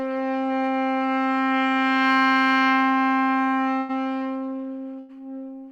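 At 3.79 s and again at 4.99 s there is a burst of packet loss. Each time, a run of audio never reached the player in time. The receiver stretched the last sound for about 94 ms and let it fade into a dull hiss. About 60 ms of the original is then gone. The first gap ends at 3.92 s. The second ends at 5.20 s, where playback jumps ahead.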